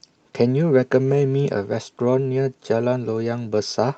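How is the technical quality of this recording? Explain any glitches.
The speech has timing glitches throughout, caused by two related faults. The top end stops around 8 kHz, consistent with a call codec.

Clock drift between sender and receiver runs the whole clip. The sender's clock runs around 4 percent fast, so the receiver's buffer keeps overfilling. Unlike packet loss, nothing drops out or warbles.

Repeated timing corrections occur from 0.15 s to the end. The receiver keeps trimming short slivers to keep pace with the 104% incoming rate. These are slight, unevenly spaced hiccups rather than a steady pitch or speed shift.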